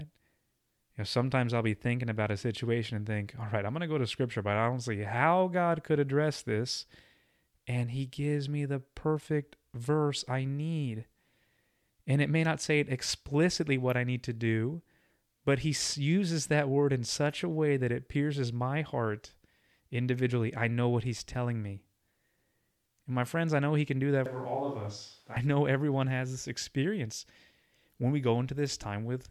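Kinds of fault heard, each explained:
Switch to a distant microphone, 24.26 to 25.37 s: right after "he can do that", the speech turns abruptly roomy and hollow for about 1.1 s, loses low-end body, drops roughly 5 dB in level and carries more room noise, around 30 dB below the speech. It snaps back just before "know everyone has this". The sudden change in both directions points to the close microphone likely dropping out, leaving a farther pickup that hears more of the room.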